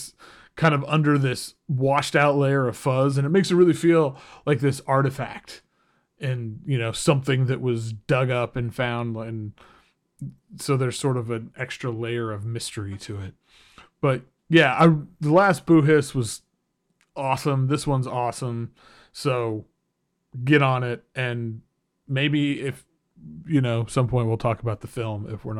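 Nothing goes wrong anywhere in this speech recording, so there's no technical fault to point out at any moment.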